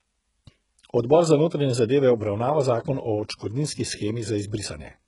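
HE-AAC compression runs throughout this speech clip, with heavy damage and nothing above 11.1 kHz. The treble is likely rebuilt by spectral band replication from copied lower bands, so s sounds turn gritty and metallic, which fits a very low bitrate near 12 kbps.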